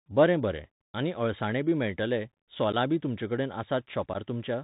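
Throughout, the speech sounds muffled and narrow, with scratchy s sounds and a granular hiss. This is the Bluetooth CVSD headset codec, whose one-bit 64 kbps coding passes nothing above 4 kHz. At 2.72–2.75 s and again at 4.14–4.16 s, the speech drops into abrupt holes of about 11 ms. This is unconcealed Bluetooth headset packet loss: a few voice packets went missing and were replaced with nothing.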